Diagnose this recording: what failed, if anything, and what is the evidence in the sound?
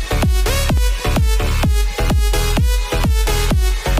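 CD scratch ticks run from 0.55 s to 2.10 s: eight short, regular ticks, about five per second, the longest only a few milliseconds. The fault lies in playback from the disc. A scratch or blemish on the surface damages more data than the player's error correction can restore, and it passes under the laser once per revolution. Each time, the player fills the gap by interpolation or muting, and the abrupt patch is heard as a tick.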